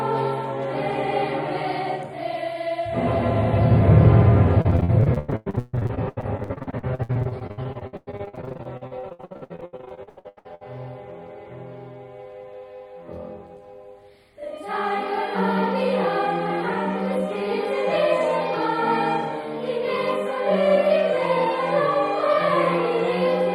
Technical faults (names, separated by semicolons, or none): repeated packet loss (robotic sound)